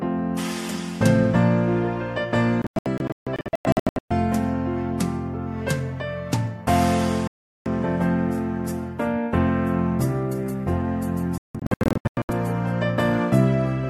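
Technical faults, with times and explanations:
2.62–4.11 s, 7.27–7.66 s and 11.38–12.30 s: digital broadcast dropout. Corrupted or missing frames make the receiver mute, so the sound drops out and returns. The first and last stretches split into short holes, the longest 0.14 s and 0.17 s. The middle gap lasts 0.38 s.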